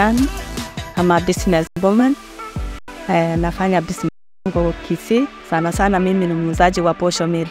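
At 1.67–1.77 s, 2.79–2.88 s and 4.09–4.46 s, an underrun with held sample freezes the waveform flat: the sound stops, and roughly 100 ms, and about 400 ms at the third, went missing. Spectrograms show blank bands.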